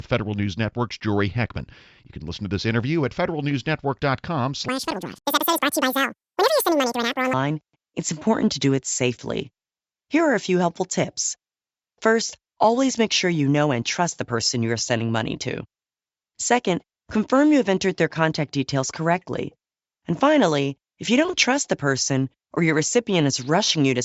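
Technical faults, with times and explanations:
4.69 to 7.33 s, wrong sample rate: the speech runs twice as fast and a full octave (12 semitones) higher, which fits 16 kHz material played back at 32 kHz without conversion, so speed and pitch double together. On a spectrogram, harmonics and formants sit at twice their normal spacing and height, and syllables are squeezed into half the time. The waveform shows each cycle at half its usual length, packed more densely.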